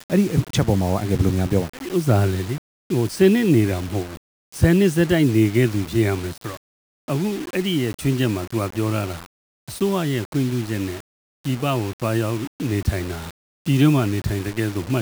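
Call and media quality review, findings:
Low bit depth without dither, throughout. Grainy distortion tracking signal level; quiet passages gritty, faintest detail sputtering or dropping to silence. Waveform: visible staircase steps, 5-bit rounding. Spectrogram: broadband hash following signal envelope, about 20 dB below it, vanishing in gaps. Likely cause: requantisation without dither in the processing chain.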